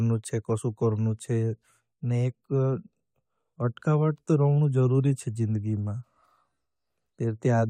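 No technical faults are audible in this recording.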